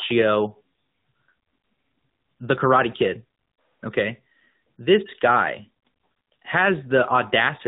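AMR narrowband mobile codec coding runs through the whole of this speech clip, from start to finish. Everything above 4 kHz is gone, so the speech has the boxed-in, band-limited quality of a phone call, and the codec damage is plainly audible: the voice takes on a buzzy, synthetic edge because it is rebuilt from a vocal-tract model driven by sparse pulses in 20 ms frames, at a rate that sounds like AMR-NB's 10.2 kbps mode.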